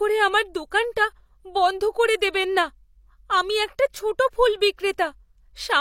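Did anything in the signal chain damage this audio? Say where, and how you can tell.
Yes, at the codec stage: pre-echo at about 0.71 s. A short hiss of about 10 ms sits just ahead of a sharp speech onset, and the attack sounds softened. The transform coder spread quantisation noise across its block, so noise meant for the loud onset leaked into the quiet gap before it.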